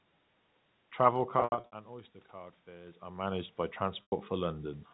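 From 1.4 to 1.72 s the sound turns briefly held and buzzy in scattered bursts, the longest about 80 ms. This is packet loss with pitch repetition: about 240 ms of audio went missing and was bridged by repeating the last pitch period.

From 1.86 to 4.59 s, voice and room noise swell together by about 5 dB. Automatic gain rising is compensating for an input that fell about 15 dB as the talker moved back.

From 4.02 to 4.12 s, a 100 ms gap is bridged by repeated pitch that fades into silence, and the speech returns with a short cross-fade, another instance of packet loss with pitch repetition.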